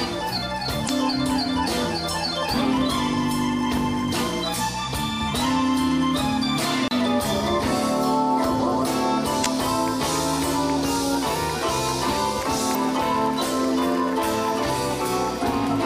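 A short glitch at 0.85–0.90 s is damaged data in the compressed stream: corrupted frames make the decoder lose sync and resume at the next header. At 6.88 s a very brief mute, a few hundredths of a second, precedes a sudden jump in position, the mark of a CD skip, where the laser leapt to another turn of the disc. The same corruption glitches recur at 9.42–9.46 s and 12.71–12.76 s.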